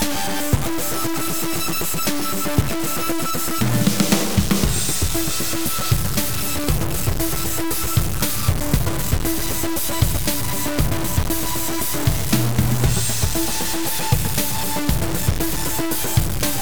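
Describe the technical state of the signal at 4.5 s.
At 4.5 s the sound carries a harsh, grainy distortion that rises and falls with the signal. It runs through the whole clip, not just this moment. The likely cause is low bit depth without dither: samples cut down to very few levels, which fits 4-bit truncation. The rounding error tracks the waveform, so it sits only a few decibels below the signal. Quiet passages turn gritty.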